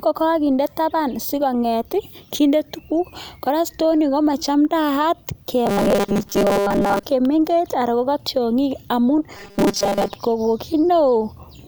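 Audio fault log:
5.66 to 7.03 s and 9.37 to 10.16 s, robotic sound from repeated short buffers: in both stretches the speech goes hard and metallic, locked onto a steady 200 Hz buzz that still loosely tracks the talking. That pitch fits a tiny 5 ms chunk being looped over and over. The likely cause is new audio not arriving in time, so the player keeps repeating its last buffer, and most of the real sound in those spans gets skipped.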